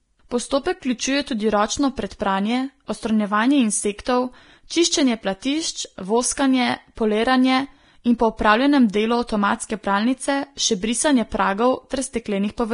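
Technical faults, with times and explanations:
Throughout, Vorbis compression: the speech sounds hissy and grainy, with a rough, buzzy edge on sustained tones and softened onsets, and nothing is audible above 10.6 kHz. The likely cause is heavy lossy coding with Vorbis at a low quality setting, which fits a bitrate around 31 kbps. The encoder lowers its cut-off and quantises the upper spectrum so coarsely that fine detail is replaced by noise of similar energy, leaving the treble smeared and granular.
4.05 s, pre-echo: a short burst of hiss sits just ahead of a sharp attack, spread over about 17 ms, so the onset sounds blurred rather than crisp. The transform codec distributes its quantisation noise across the whole block. Because this attack lands late in its block, noise scaled to suit the loud onset also fills the quiet stretch before it, where nothing masks it.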